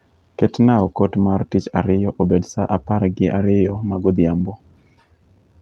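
Small, uneven hiccups run through the whole speech clip, with the pacing never quite settling. This is clock drift between sender and receiver: the sending side's audio clock runs fast, by roughly 4 percent, so more audio arrives than the receiver plays out in the same time. Its jitter buffer keeps filling, and the receiver has to keep getting rid of the surplus rather than letting the delay build.

From 0.23 s to 5.39 s the tempo sounds slightly rushed and unsteady, with tiny skips scattered at irregular spacing. These are repeated timing corrections. The receiver keeps trimming short pieces out of the stream, always in the same direction, so the audio comes out at about 104 percent of its pace. Each cut is brief, heard as a small stumble rather than a gap, over a call path whose Opus coding tops out around 12 kHz.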